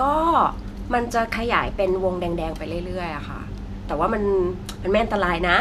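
No technical faults can be heard anywhere in the recording; the signal stays continuous and steady throughout.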